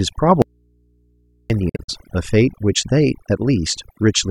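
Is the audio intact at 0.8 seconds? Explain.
No. Between 0.42 and 1.50 s the signal feed was likely lost while the path after the break stayed live, an audio dropout to a faint residue. The speech cuts off abruptly for about 1.08 s, leaving only a low mains hum roughly 40 dB below the speech level.

Throughout the clip, including 0.8 s, overdone noise removal pushes individual frequency bands near the noise estimate far down, along with quieter parts of the voice. The background drops and breaks up into twinkling specks.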